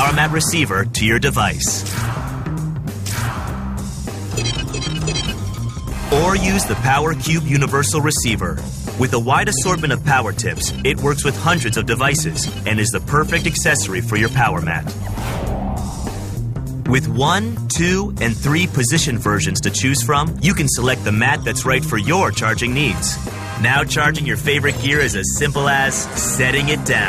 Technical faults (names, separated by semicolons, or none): none